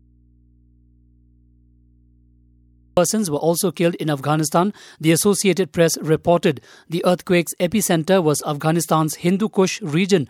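From the very start of the speech until 2.97 s, only a low mains hum is audible, roughly 35 dB below the normal signal level. The speech then cuts in abruptly with "were also killed in", with no fade. This is an audio dropout to a faint residue, already under way when the clip begins. The likely cause is a lost source feeding a path that stayed live, so the open input picked up hum through the gap.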